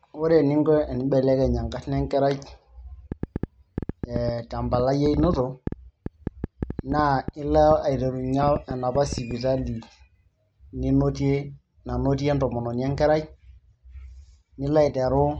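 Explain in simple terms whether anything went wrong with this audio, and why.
Yes, something went wrong. From 3.12 s to 9.32 s a train of clicks sits over the speech: roughly forty sharp ticks, about six a second but at an uneven pace, each one loud enough to stand out above the talking and audible in the pauses too. A burst of same-shaped pulses like this likely comes from electrical interference from nearby equipment or from a faulty connection or power supply.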